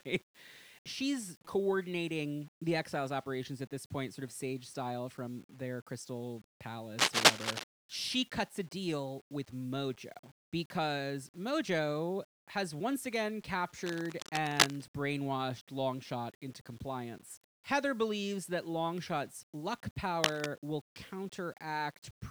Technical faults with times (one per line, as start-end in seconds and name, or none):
0.00-22.31 low bit depth without dither